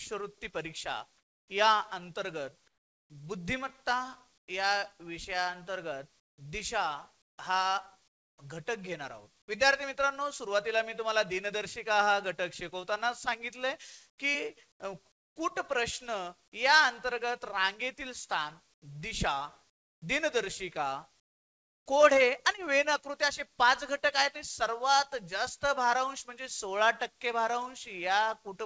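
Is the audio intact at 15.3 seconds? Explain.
No. From 14.10 to 15.36 s the sender likely halted transmission during a detected pause, and the receiver filled the gap with comfort noise in place of the background, so the real ambience is swapped for a steady, featureless hiss until the sound resumes.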